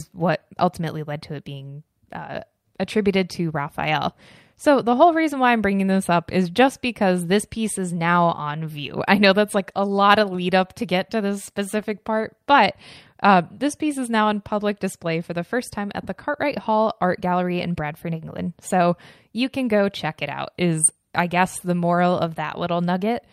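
Listening to the speech recording from beginning to end, nothing stood out as a technical problem.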